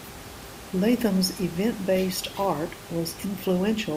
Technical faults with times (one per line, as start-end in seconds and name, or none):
none